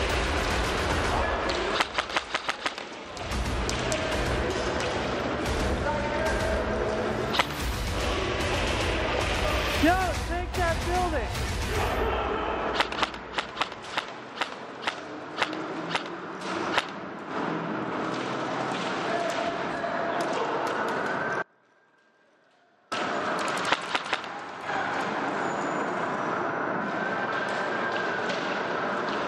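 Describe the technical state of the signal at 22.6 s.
At 22.6 s the signal sits inside an audio dropout to a faint residue, running from 21.43 to 22.92 s. The sound cuts off abruptly for about 1.49 s. Only a faint leak remains, around 35 dB below normal. The likely cause is a lost signal while the path stayed live.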